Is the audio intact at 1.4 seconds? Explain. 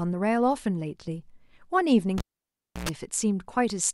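Yes, the speech at 1.4 seconds is intact, with no dropout, click, distortion or other fault at that moment.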